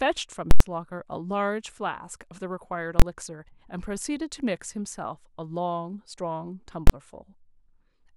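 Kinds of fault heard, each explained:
Invalid numbers at full scale: a loud pop at 0.51 s and another at 0.60 s with silence between, then single bangs at 3.00–3.02 s and 6.87–6.90 s. A calculation went invalid, pinning the output to one extreme value for one block, 93 ms then 23 ms, fitting 4096- and 1024-sample blocks.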